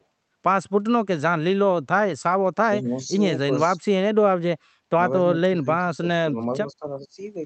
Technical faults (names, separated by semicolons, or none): speech suppressed in double talk